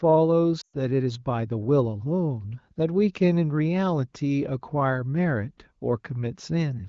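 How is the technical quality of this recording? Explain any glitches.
The one clear glitch is a burst of lost AMR speech frames at 0.61 to 0.77 s, heard through an AMR wideband (HD Voice) link whose light coding texture points to a mid-range rate around 16 kbit/s. Radio errors corrupted the frames, so the decoder repeated the last good pitch and vocal tract parameters with falling gain. Over about 120 ms, which fits six 20 ms frames, the sound drops quickly to near silence, then returns briefly weak.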